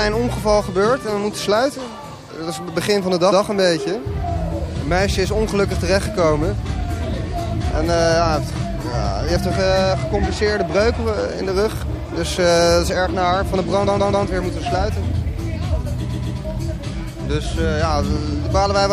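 Throughout the audio the encoder has been starved of bits, most likely by MP3 compression at a rate that fits about 64 kbps. It drops weak frequency lines that flicker in and out from frame to frame, so the damage is plainly audible: a watery, swirling texture, metallic chirps on bright hiss-like sounds, and softened attacks. Repeated frames also occur, where a run of compressed frames was delivered more than once and the decoder replays the same slice. From 3.31 to 3.41 s a block of about 105 ms plays once more, adding roughly 105 ms. From 13.86 to 14.25 s a block of about 131 ms plays three extra times, adding about 392 ms. From 16.11 to 16.37 s a block of about 131 ms plays two extra times, adding about 261 ms. Each is heard as a stutter.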